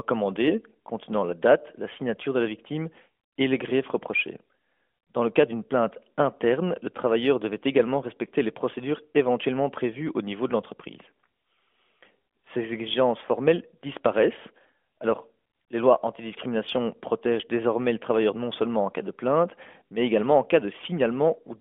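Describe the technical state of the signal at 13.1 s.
At 13.1 s the speech passes intact, carried by the narrowband mobile codec path with its telephone-band sound, and no fault can be heard at that moment.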